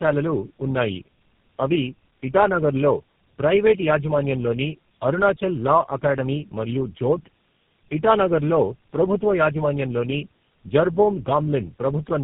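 Tandem speech coding runs from start to finish: the speech passed through three low-rate speech coders in a row, being decoded and re-encoded at each link, so every coder worked on the already damaged output of the one before. The result is rough, muffled and warbly speech with nothing above 3.5 kHz. This fits a route through G.729A at 8 kbit/s twice, joined by G.711 links, and ending in GSM full rate.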